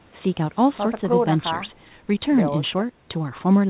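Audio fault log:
No faults found; the speech arrives over a WebRTC call path with nothing above 4 kHz, which fits G.711 A-law at 64 kbps.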